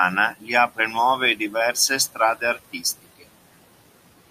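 Across the whole clip the background pumps down in the gaps and swells back under the speech. These are noise suppressor artifacts: the suppressor cuts the steady room noise, which sits about 19 dB below the speech, by about 18 dB frame by frame.

At 0.33 to 0.49 s, 1.36 to 1.55 s, 2.4 to 2.84 s and 3.03 to 3.24 s, parts of the speech sound swallowed and faint, in total about a tenth of a second each time. This is speech cut by the noise suppressor, which mistook those parts for noise and lowered them by up to about 9 to 17 dB.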